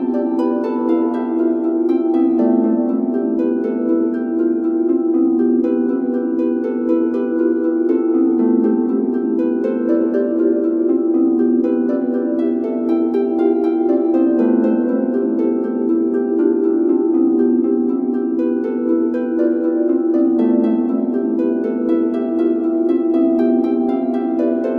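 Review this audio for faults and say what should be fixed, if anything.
Nothing in this recording of sounds needs fixing. No fault can be heard anywhere in it, so no change is called for.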